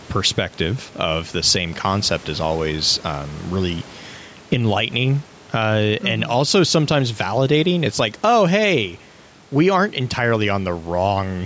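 Speech, with gain pumping throughout. The background swells between phrases, then ducks roughly 10 dB under each loud sound. Input gain set far too high, clamped by a fast limiter, is the likely cause.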